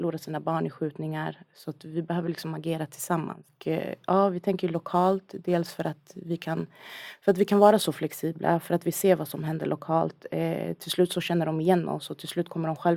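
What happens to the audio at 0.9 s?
Nothing goes wrong at 0.9 s; the speech there is intact.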